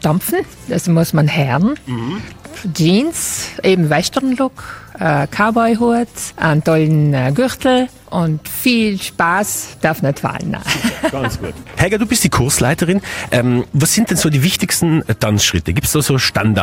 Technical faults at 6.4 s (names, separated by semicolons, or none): none